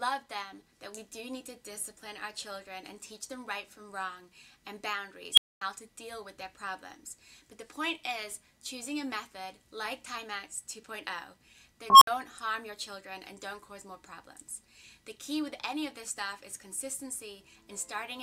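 At 5.33 s and again at 11.9 s there's an unstable filter: feedback runs away, so a tone near 3 kHz, then near 1 kHz, swells within 44 ms and 113 ms into a loud squeal, overflows, and drops out for 240 ms and 60 ms.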